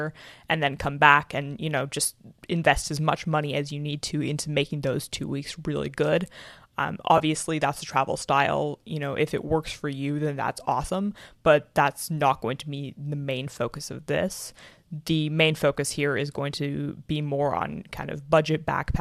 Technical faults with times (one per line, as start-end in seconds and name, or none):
7.17-7.21 AAC frame loss with concealment